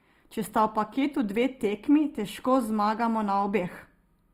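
Right from the start there's channel delay (comb filtering): one side lags by a tiny fraction of a millisecond, so the mono sum notches out around 7 kHz and the top sounds hollow. Across the whole clip the speech also turns grainy and rough, with plainly audible damage that likely comes from Opus compression at a low bitrate while still reaching about 20 kHz.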